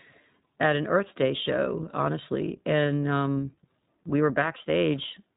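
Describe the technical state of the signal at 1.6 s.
At 1.6 s the speech sounds band-limited and slightly rough, with a synthetic edge and nothing above 4 kHz. This is the iLBC codec damage, which runs through the whole clip and is plainly audible here. iLBC codes the excitation of each short frame on its own, without drawing on the previous frame. The coarse frame-by-frame modelling, which fits its 15.2 kbps mode with 20 ms frames, gives the grainy texture, and narrowband coding removes the upper spectrum.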